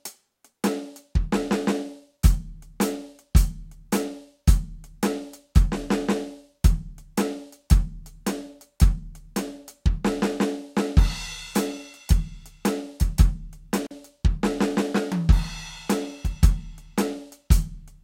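At 13.85 to 13.91 s the music drops out for about 45 ms, an intermittent contact: a loose connection briefly opens. Crackle flanks the gap. The waveform shows near-silence, the spectrogram a dark slot edged by vertical clicks.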